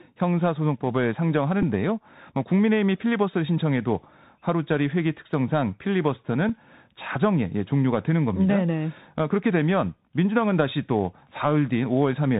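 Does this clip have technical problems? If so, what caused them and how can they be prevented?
Yes. The speech carries Bluetooth CVSD headset codec damage throughout, and it is plainly audible. Nothing above 4 kHz survives, so the sound is narrowband and boxy. This codec sends a single up-or-down bit per sample, which fits a 64 kbps link, and the step size adapts as it goes. Loud high-frequency sounds outrun that step and distort. S sounds turn scratchy, and a granular hiss sits under everything. To prevent this, record through a wideband headset profile or a wired microphone.

Bluetooth headset packet repeated faults appear twice, at 1.62 s and 6.49 s. The first fills about 7.5 ms, which points to two lost voice packets. The second fills about 3.8 ms, which suggests one. In each case the headset chip lost packets on the radio link and decoded the previous packet's bits again in their place. 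The single repeat registers only as a small tick. To prevent this, keep the headset close to the phone and away from radio interference.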